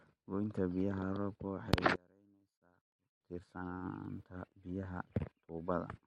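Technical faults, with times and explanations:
1.96 to 3.21 s, one channel inverted: for about 1.25 s the speech collapses by about 28 dB to a faint residue, then returns at full level. The cause is likely a polarity flip in one stereo channel, so when the two channels are summed to mono, everything they share cancels. The centred voice and its low end nearly disappear, leaving only the small differences between the channels.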